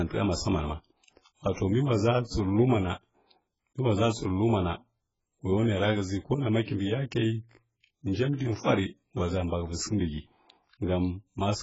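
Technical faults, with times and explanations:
throughout, AAC compression: the speech has likely been squeezed through an AAC-LC encoder working very hard for bits, which fits a bitrate of around 12 kbps. With so little to spend, the coder discards the top of the spectrum, so nothing is heard above 7.6 kHz, and quantises the remaining frequency lines coarsely. The damage is heavy: the voice sounds dull and smeared, sibilants lose their crispness, and sustained sounds take on a warbling, fizzy texture.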